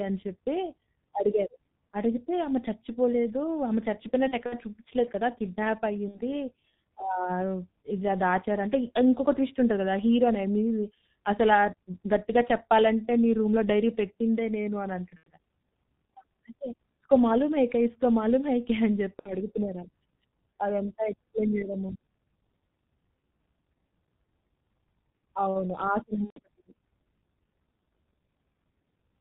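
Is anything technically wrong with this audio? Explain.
Yes. The speech runs through the G.723.1 codec the whole way, heavily damaged at around 6.3 kbit/s. Nothing above 4 kHz survives, and the slow 30 ms model updates smear consonants. The voice sounds muffled and hoarse.

There is also VoIP packet loss concealed by the speech codec at 4.28 to 4.59 s, 6.08 to 6.21 s, 15.17 to 15.31 s, 19.19 to 19.33 s and 26.24 to 26.39 s. About 60 to 120 ms goes missing each time. At 4.28 s it is scattered over 240 ms, with the longest gap 60 ms. The decoder repeats its last pitch and filter at falling gain. Each gap becomes a fading buzz or coloured noise, and the voice stays weak briefly afterwards.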